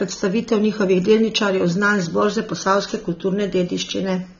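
Dull, band-limited speech, with nothing above about 6.9 kHz and a warbling, fizzy smear on sibilants throughout, likely AAC compression at a low bitrate, around 24 kbps.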